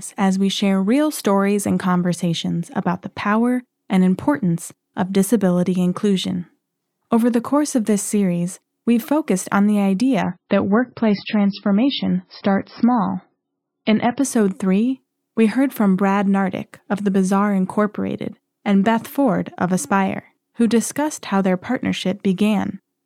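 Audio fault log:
10.22–14.22 s: adaptive stream at a lower bitrate. With no gap, the speech suddenly turns dull and swirly for four seconds. This fits a drop from 128 to 17.6 kbit/s MP3. On a spectrogram, everything above 5.6 kHz vanishes in a flat-topped block.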